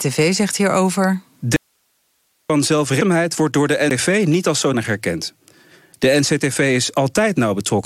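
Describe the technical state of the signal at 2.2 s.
At 2.2 s the speech is gone, mid-dropout: an audio dropout to a faint residue from 1.56 to 2.50 s, lasting 0.93 s, likely a break upstream while the path stayed live. Only hiss remains, about 45 dB down, a flat near-empty waveform and diffuse grey spectrogram band with abrupt edges.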